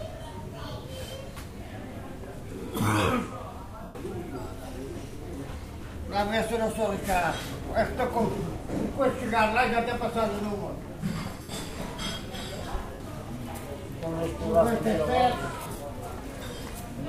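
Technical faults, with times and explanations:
3.83, 11.42, 12.93 and 15.62 s: lost LE Audio frames. Gaps of 120, 70, 70 and 140 ms, the last scattered over about 180 ms in short runs. The LC3 decoder refills each gap with the last spectrum under random signs, fading it, so tones smear into noise.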